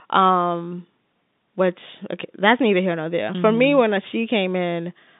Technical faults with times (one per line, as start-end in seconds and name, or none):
none